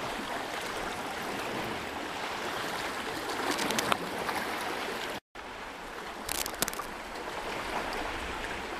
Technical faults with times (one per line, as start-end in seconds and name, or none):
3.51-3.86 cable scratch noise
6.27-6.86 cable scratch noise